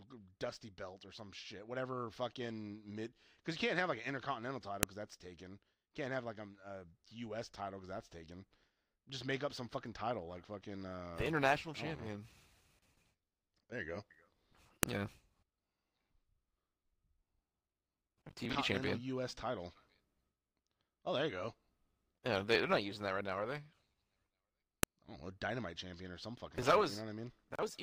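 Sharp clicks snap through this speech at 4.83 s (after "have like an intercontinental"), 14.83 s and 24.83 s: file header played as audio, where each 10-second piece's header bytes play as samples.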